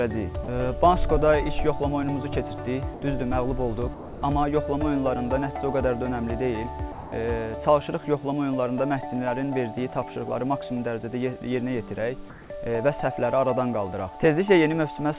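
Four short gaps break the sound at 0.44 s (40 ms), 2.94 to 3.02 s (80 ms), 3.94 to 4.22 s (280 ms) and 6.92 to 7.12 s (200 ms). Each time the real signal gives way to steady, featureless noise and then returns abruptly. This is sound dropped by the voice detector: the sender likely judged these stretches to be background and stopped transmitting, and the receiver filled the gap with comfort noise. On a spectrogram each gap is a flat, uniform smear where the harmonic or textured detail vanishes. The waveform shows a sudden flat band with hard edges. Between 12.3 and 12.5 s there is also comfort noise in place of the background. The actual background, about 21 dB below the loud passages, is swapped for smooth synthetic noise for 200 ms, with a level shift of only about 1 dB. The swap is therefore heard as a change of texture more than of loudness, likely from discontinuous transmission during a pause. 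On a spectrogram the fine grain of the background turns into an even, structureless wash, and the waveform's noise floor goes unnaturally regular. The call path itself passes nothing above 4 kHz, which fits narrowband G.711 A-law coding.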